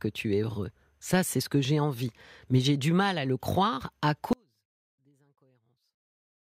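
A speech clip with an audio dropout to a faint residue: right after "à le croire à", at 4.33 s, the signal cuts abruptly and stays down to the end, leaving only a faint trace roughly 40 dB below normal level. This likely reflects the source being lost while the downstream path stayed live.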